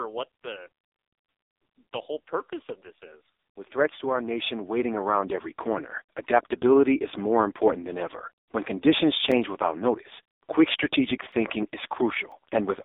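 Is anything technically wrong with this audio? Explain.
Yes, there are two problems. For the whole clip, the speech has the AMR narrowband mobile codec sound. It's squeezed into a phone-line band of roughly 300 Hz to 3.7 kHz, with nothing above 3.8 kHz. The codec rebuilds the voice from a vocal-tract model fed by a few pulses per short subframe, and the damage here is heavy. That gives a buzzy, synthetic quality, and the heaviness points to one of the lowest modes, around 5.15 kbps.

Then, from about 8.32 s, right after "more important than ever", until 12.32 s, you get periodic USB or driver dropouts. Something blocks the audio path once a second, and each time a few milliseconds of signal get replaced by silence. That happens about five times. Because the gaps are so short and evenly spaced, they come across as regular little ticks riding on the speech, one per second, rather than audible holes.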